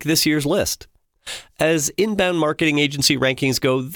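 No technical faults can be heard in this speech recording.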